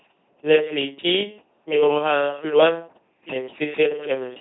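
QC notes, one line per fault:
Throughout, LPC-10 vocoder: the speech turns into a buzzing, mechanical robot voice with no content above about 3.9 kHz, and heavy damage that fits a 2.4 kbit/s coder. A short all-pole filter driven only by pulses or noise replaces the natural voice.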